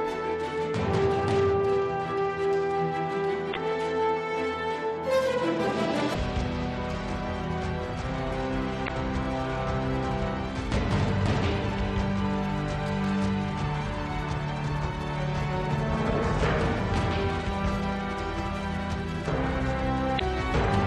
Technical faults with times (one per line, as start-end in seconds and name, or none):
3.51-3.57 damaged data in a compressed stream
6.10-6.16 damaged data in a compressed stream
8.84-8.90 damaged data in a compressed stream
20.15-20.21 damaged data in a compressed stream